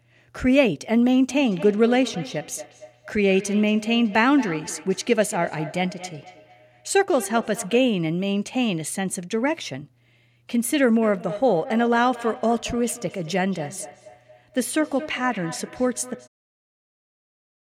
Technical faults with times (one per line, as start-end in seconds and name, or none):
1.29-8.00 feedback echo between two devices
11.02-16.69 feedback echo between two devices